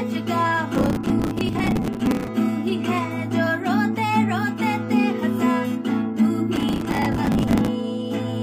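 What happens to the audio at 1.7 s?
At 1.7 s the sound is in the middle of a burst of processor overload crackle. It runs from 0.75 s to 2.28 s. The processor falls behind and misses buffer deadlines over and over, dozens of them across the stretch. The buffers appear to be around 10 ms long. Each miss replays a scrap of old audio with hard edges. Stacked together, these repeats produce a gritty, tearing crackle riding on the sound until the load clears.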